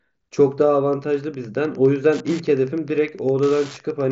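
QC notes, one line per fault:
0.89–4.12 s, Wi-Fi interference: a ticking every 102.4 ms, about ten per second, roughly 25 dB below the speech, as the audio circuit rectifies a nearby radio's beacon. Its strict, non-tonal pulse rate separates it from mains buzz or random clicks.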